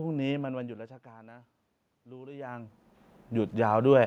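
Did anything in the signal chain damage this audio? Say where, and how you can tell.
Yes. Automatic gain rising in the call processing stage: from 1.03 s to 4.02 s, speech and room noise swell together by about 10 dB. The input fell by about 20 dB, so the gain control ramped its gain up slowly to compensate.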